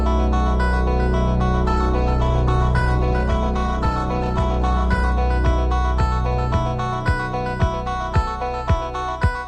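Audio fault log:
1.65–5.23 s, call bitrate drop: the call's bandwidth estimate fell and the encoder was forced to spend far fewer bits, consistent with a fall from about 64 kbps to roughly 15 kbps. The sound turns coarse and smeared, bottoming out for 3.47 s before recovering.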